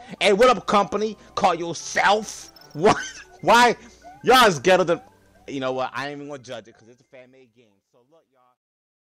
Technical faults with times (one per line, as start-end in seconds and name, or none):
5.38-9.04 truncation distortion on a fade